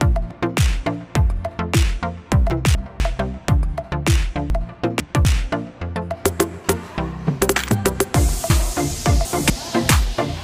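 Three jumbled moments, at 2.5 to 3.0 s, 4.5 to 5.25 s and 8.5 to 9.5 s, are chunks out of order: a 250 ms chunk plays one, two, then three chunks late.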